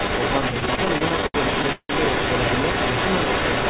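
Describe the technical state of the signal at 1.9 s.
At 1.9 s a second copy of the speech trails the first by 186 ms, at roughly the same loudness. This is an echo leak, likely from a loudspeaker whose echo canceller let the pickup return.

The same moment is the last of a stretch from 0.6 to 1.91 s where the speech drags and stutters. These repeated stalls (stutter) come from the jitter buffer running dry 16 times. Each gap, up to 171 ms, was filled by stretching the last sound, covering about 31% of that span with nothing lost.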